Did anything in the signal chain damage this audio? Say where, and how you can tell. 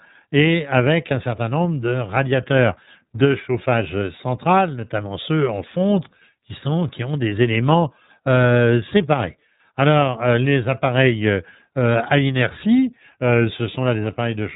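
Yes, at the codec stage: the speech was passed through the iLBC codec throughout, with its band ending near 3.8 kHz and plainly audible coding roughness, which fits the 30 ms-frame, 13.33 kb/s mode. Each frame's excitation is coded independently, giving a slightly synthetic, gritty narrowband sound.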